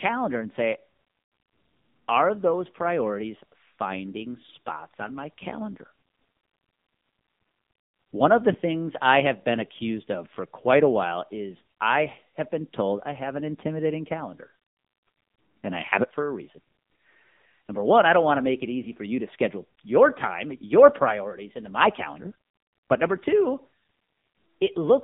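From start to end, the speech passes through the AMR narrowband mobile codec. The line band runs from about 150 Hz to 3.7 kHz, and nothing above 3.7 kHz survives. The codec rebuilds the voice from a vocal-tract model fed by a few pulses per short block. Here the damage is heavy. The voice sounds buzzy, thin and synthetic, which fits a low 6.7 kbps mode.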